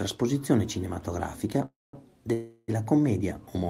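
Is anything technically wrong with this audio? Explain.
Yes. The speech has two call audio freezes. At 1.65 s the sound stalls into a fading buzz or hiss, then goes silent for about 0.19 s before resuming at 1.95 s. At 2.33 s it stalls again and stretches to 2.70 s without reaching silence. Packets were likely held up in transit, emptying the jitter buffer. The receiver padded the gaps, 0.28 s and 0.35 s. Nothing is lost. The speech simply resumes later.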